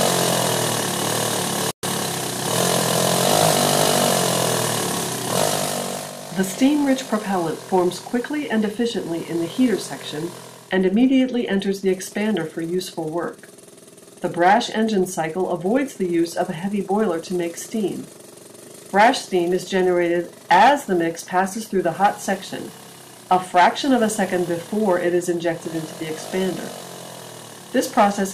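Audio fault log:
1.71–1.83 s, playback stall: the player most likely ran short of buffered data or had its output thread held up. The audio drops to silence for about 120 ms in mid-flow, then carries on.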